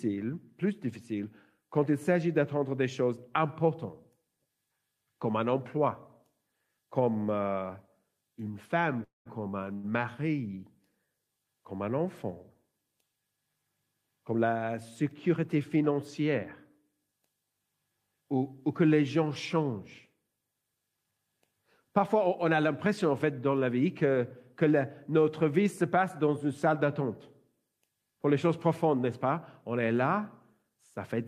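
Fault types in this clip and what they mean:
Call audio freeze: At 9.03 s the sound stops advancing for about 0.22 s. The last sound carries on briefly as a fading buzz, then drops to about 150 ms of silence before the audio resumes exactly where it stopped, with nothing skipped. The likely cause is packets held up in transit, draining the jitter buffer. Unlike the short stall, this gap lasts long enough to decay into silence rather than staying a held tone.
Short stall from a late packet: At 9.74 s one sound is held about 100 ms too long, with a slight buzz or dip. The receiver stretches it while waiting for a single overdue packet, then continues from the same point with nothing lost. It differs from the freeze by being brief and never fading to silence. The stretched sound stays audible throughout, so it comes across as a small hitch rather than a dropout.
Jitter buffer speed-up: From 20.75 to 21.33 s the sound runs about 12% fast, with roughly 70 ms trimmed away. 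From 30.63 to 31.14 s it runs about 7% fast, with around 50 ms removed. The receiver cuts tiny pitch-period slices to shrink an overfull buffer, so the timing hurries while the pitch stays put. The steady pitch separates it from a sample-rate error, and unlike the stalls, nothing is held or gapped.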